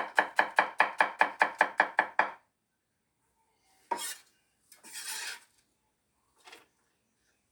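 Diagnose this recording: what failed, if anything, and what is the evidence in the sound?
Nothing failed in this recording, and the sound gives no evidence of a fault at any stage.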